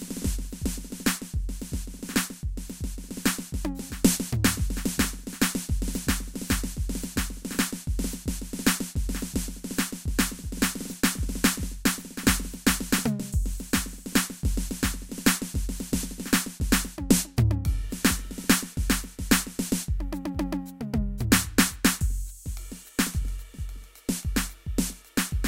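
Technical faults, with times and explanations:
Nothing technical gets in the way of this music at any point; there's simply no fault to log here.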